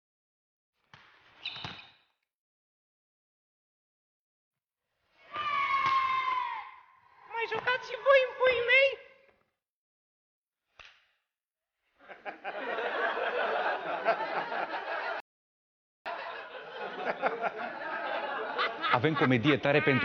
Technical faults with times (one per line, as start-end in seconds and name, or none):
2.42-4.20 rebuffering stall
15.20-16.06 rebuffering stall